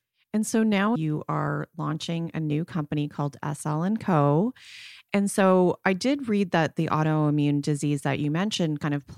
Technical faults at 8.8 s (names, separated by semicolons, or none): damaged data in a compressed stream